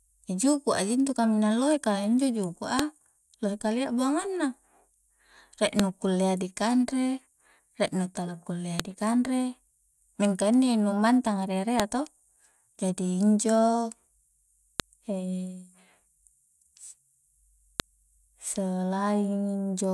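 A file header played as audio clicks sharply at 2.79, 5.79, 8.80, 11.80, 14.80 and 17.80 s, as each 3-second chunk's header bytes play as samples.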